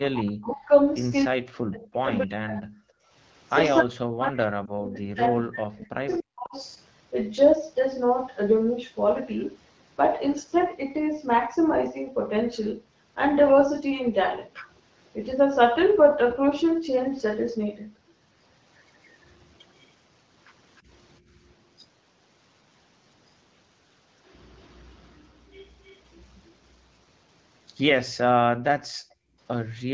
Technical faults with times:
0.00-0.72 speech suppressed in double talk
1.25-2.90 speech suppressed in double talk
3.82-6.56 speech suppressed in double talk
4.65-4.71 lost AMR speech frames
20.78-20.82 echo leak
21.20-21.39 background gated by the echo canceller
24.68-26.00 echo leak
28.87-29.92 background gated by the echo canceller

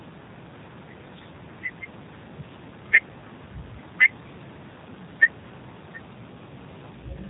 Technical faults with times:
0.00-7.29 G.729 codec

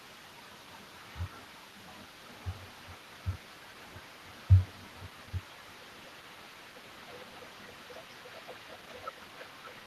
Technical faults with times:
0.00-9.87 echo leak

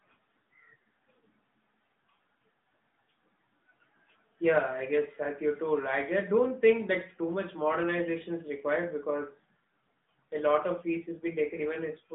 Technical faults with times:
0.00-12.15 AMR narrowband mobile codec

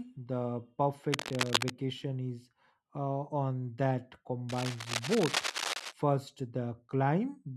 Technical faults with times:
1.12-1.70 cable scratch noise
4.49-5.93 cable scratch noise

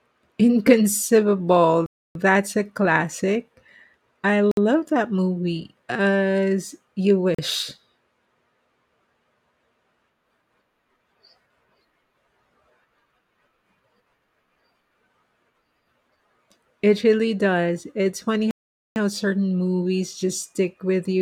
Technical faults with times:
1.86-2.15 Bluetooth stall
4.51-4.57 Bluetooth stall
7.35-7.39 Bluetooth stall
18.51-18.96 Bluetooth stall

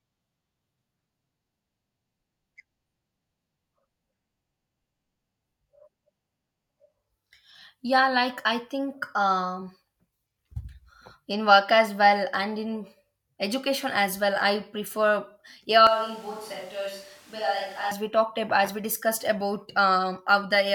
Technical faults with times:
15.87-17.91 switch to a distant microphone

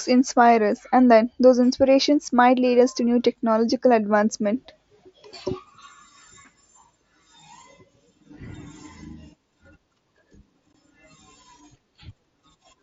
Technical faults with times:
10.73 unconcealed Bluetooth headset packet loss

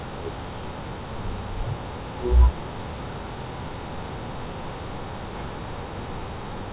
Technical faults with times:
0.00-6.72 wrong sample rate

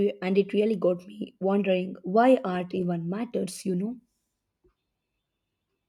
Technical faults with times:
none

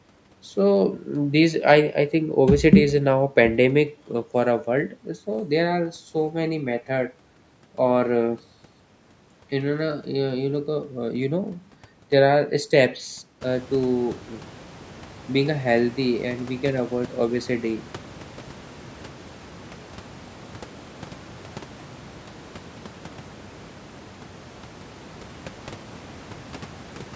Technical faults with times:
none

